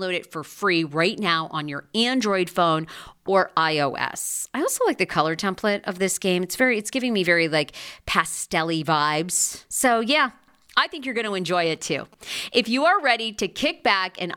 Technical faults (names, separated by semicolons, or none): periodic USB or driver dropouts; GSM signalling bursts